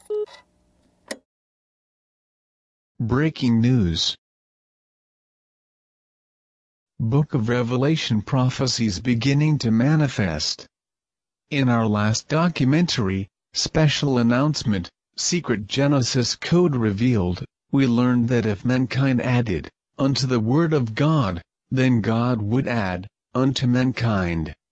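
No technical faults detected.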